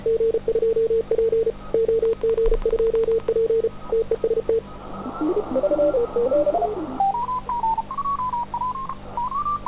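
From 2.05 to 3.29 s a train of clicks sits on top of the sound: about fifteen sharp ticks of near-identical shape, evenly spaced at 12.2 per second, peaking a few decibels above the material beneath them. They are most likely interference or a struggling interface injecting pulses. What separates them from packet-loss glitches is their regular rhythm, their repeated shape, and the fact that they ride over the audio rather than disturbing it.

Two short concealed packet losses follow, at 7.77 s and from 8.87 to 8.90 s. Each time roughly 10 ms of audio failed to arrive, and the receiver papered over the hole by extending the preceding sound and then blending back in. The first repair is very brief and the second is longer at about 14 ms. Both are heard as a momentary smear or wobble rather than a crisp tick, and each is a single isolated event instead of part of a pulse train. The narrowband call path, with nothing above 4 kHz and consistent with G.711 A-law at 64 kbps, dulls the sound throughout.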